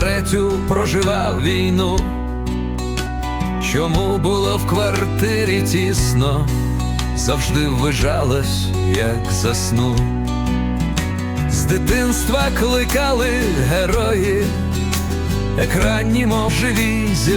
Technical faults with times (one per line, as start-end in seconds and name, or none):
1.38 compressed frames skipped
3.06 compressed frames skipped
8.42-8.45 compressed frames skipped
11.11 compressed frames skipped
15.08 compressed frames skipped
16.48-16.51 compressed frames skipped